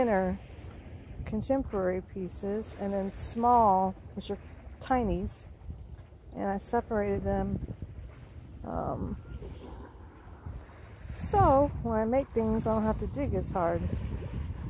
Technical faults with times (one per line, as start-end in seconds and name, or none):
none